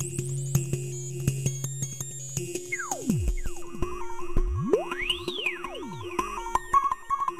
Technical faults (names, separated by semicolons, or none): none